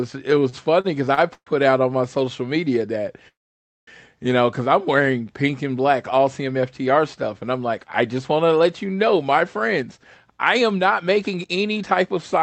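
From 0.49 to 1.49 s, just before "out on my", packets reached the receiver late and more slowly than they were played, so the jitter buffer ran dry four times. Each time the receiver stretched the last sound to fill the wait, about 231 ms in total with the longest hold 134 ms, nearly a quarter of that second. These are repeated stalls (stutter): nothing is lost, but the speech catches and drags in small hitches.

At 3.28 s, after "media that", the stream halts. Packets were most likely held up in transit and the jitter buffer emptied. The receiver kept the last sound going briefly and then let it decay, leaving about 0.56 s of silence in a 0.59 s hole before the speech resumes at 3.89 s with "you know because I'm". That is a call audio freeze, with the speech shifted later rather than cut.

From 9.75 s, after "let you know my", to 12.41 s, the jitter buffer was holding more audio than its target, so the receiver trimmed many short pitch-period slices to shed roughly 0.3 s of delay. 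This jitter buffer speed-up plays the speech at about 110 % of normal speed with the pitch unchanged, so the closing phrase sounds hurried. Throughout the clip, the call codec limits the audio to a band ending at 8 kHz.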